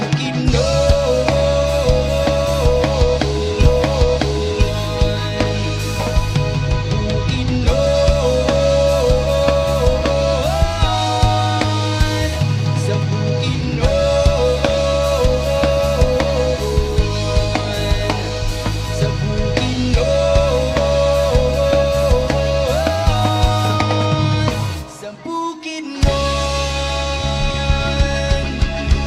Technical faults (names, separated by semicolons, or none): stream segment repeated